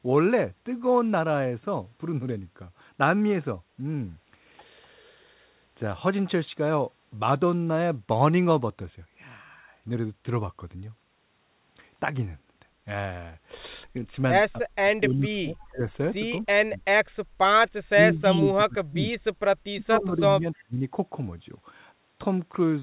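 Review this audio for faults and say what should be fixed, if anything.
Speech suppressed in double talk occurs at 14.59–15.83, 16.51–16.91, 17.88–19.14 and 19.72–20.84 s. The voice dips by roughly 30 to 40 dB. The likely cause is both sides talking at once.

Background gated by the echo canceller occurs at 17.27–17.39 s. The room sound drops about 21 dB while the loudspeaker plays, then returns.

Audio above 4 kHz is absent throughout, which fits the G.711 call path. To prevent both faults, tune the echo canceller to handle double talk with less aggressive suppression and gentler gating.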